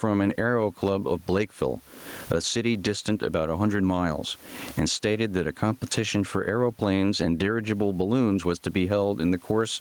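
Throughout the clip, the gain rises and drops away, a breathing, pumping effect with a swing of something like 20 dB. The room noise sits about 41 dB below the speech. Loud and quiet passages sound flattened toward one level. This is gain pumping, likely from input gain set far too high and a fast limiter or compressor clamping down on each loud sound.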